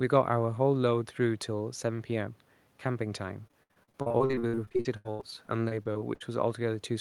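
From 3.47 to 6.22 s the speech turns choppy and robotic, with pieces missing. This is repeated packet loss: 31 gaps, the longest 84 ms, each patched by stretching the last sound, so about a third of that span is filled-in audio. Faint room noise sits about 40 dB below the speech.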